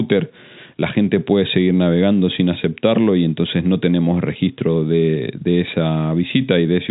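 Nothing stood out on listening to this speech clip, which carries the narrow band of ordinary telephone-line coding.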